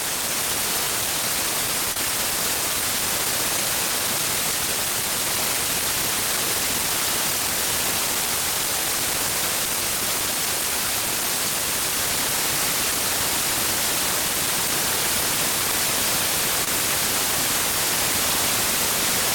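Brief smears at 1.92–1.96 s and 16.64–16.67 s are short concealed packet loss: about 30 ms and 20 ms of audio arrived too late, so the decoder extended the preceding sound before blending back.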